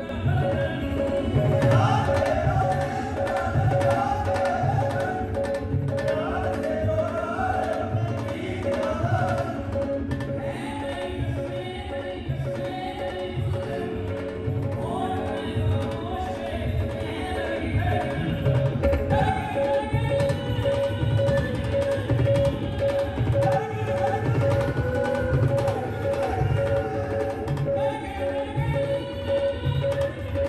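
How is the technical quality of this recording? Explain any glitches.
The recording has one clear problem, and it runs the whole way through: a channel delay (doubling). One channel arrives about 93 ms late, which fits a 4096-sample buffer, and once both are folded to mono that lagging copy sits at full level right behind the original, so everything comes across as a doubled, slapback-style echo.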